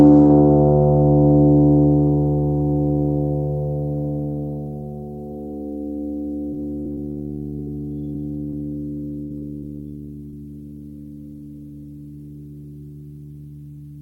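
From 6.51 to 7.19 s the music hits repeated packet loss, the robotic-sound kind. There are four gaps totalling about 160 ms, the longest 60 ms, each patched by stretching the last bit of audio. About a quarter of that stretch is filler, so it comes across choppy. Short concealed packet loss follows at 7.57, 7.65, 8.13 and 8.50 s. Each is a 20 ms hole, filled by continuing the preceding sound and then blended back, and each is heard as a quick smear or wobble. Repeated packet loss returns from 9.22 to 9.80 s with another four gaps and about 180 ms missing. The longest gap is 80 ms and nearly a third of the span is concealed. One last short concealed packet loss at 10.30 s leaves another brief 20 ms smear.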